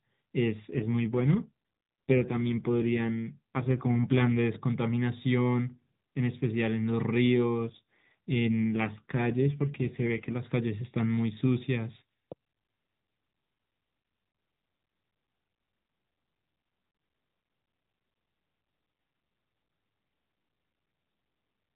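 From 0.70 to 4.43 s and again from 7.61 to 10.41 s, an AMR rate drop makes the speech rougher and more synthetic without narrowing the band, consistent with a step from 12.2 to 5.9 kbps.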